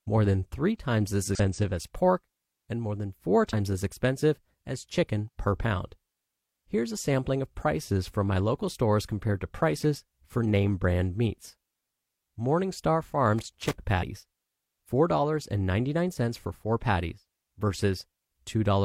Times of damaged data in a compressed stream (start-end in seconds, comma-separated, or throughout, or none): 1.35-1.40, 3.49-3.54